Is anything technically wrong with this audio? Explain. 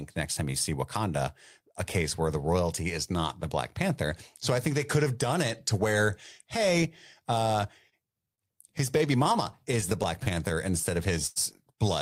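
Yes. This speech clip has three kinds of delivery fault, all in its second half, where late-arriving audio was papered over rather than lost.

Short stall from a late packet: at 7.89–7.94 s, just after "to where hey uh", then at 8.35–8.40 s and 11.27–11.38 s. Each time the jitter buffer emptied and the receiver held the last sound until data arrived, adding about 28 ms, 29 ms and 92 ms with nothing lost. You hear a sound briefly frozen, with a slight buzz or dip. On a spectrogram the harmonics run flat and unchanging for that span; the waveform shows a short stretch of near-identical repeated cycles.

Repeated stalls (stutter): from 8.78 to 10.28 s the buffer ran dry again and again, about a dozen times. The receiver extended the current sound at each gap, the longest around 23 ms, for about 137 ms of added audio, roughly 9% of that stretch. Nothing is missing, but the speech drags and catches. 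A spectrogram shows repeated short smeared patches breaking the normal formant movement. The waveform shows small copy-like segments.

Jitter buffer slow-down: from 10.35 to 10.71 s the receiver rebuilt its reserve by repeating single pitch periods or bits of pauses, stretching the passage by about 45 ms so it plays at about 90% speed with unchanged pitch. The speech sounds drawn out. A spectrogram shows harmonics at normal spacing but events spread wider in time. The waveform shows periods duplicated back to back.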